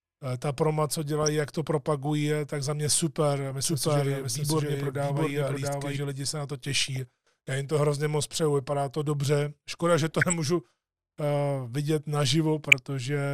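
DAB burbling first appears at 1.23 to 1.28 s, between "ta proma co" and "jak to propagují tak", and again at 3.51 s. Bit errors slipping past error correction corrupt individual sub-band samples and scale factors, so narrow bands jump in level frame by frame, giving short blips of noise rather than a clean dropout or broadband click.

From 3.65 to 5.97 s, after "tak za mě super" and up to "lidi se na to", a doubled audio track runs: a full-band second copy trails by about 0.7 s at roughly equal level. Most likely the same signal was captured twice, once through a slower path. Unlike room echo, it carries no decay or reverberant colouring and begins and ends abruptly.

The burbling returns at 6.78 to 6.97 s, just after "lidi se na to", then at 10.11 to 10.33 s and 12.69 to 12.73 s.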